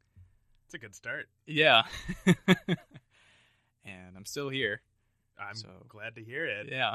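Speech, with MP2 compression damage running through the whole clip. The sound is dull and lacks its upper range. A gurgling, grainy distortion sits on the voice. High bands seem to drop in and out, so the top end flickers. The likely cause is MPEG Layer II coding at too few bits. The encoder has shut off upper sub-bands and coarsely quantised the rest. The damage is plainly audible and fits a low rate near 80 kbps.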